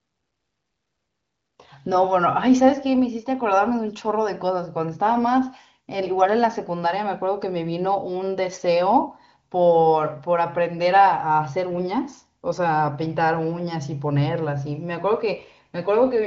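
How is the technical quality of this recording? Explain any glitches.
The technical quality of this recording is good, with no glitches to explain.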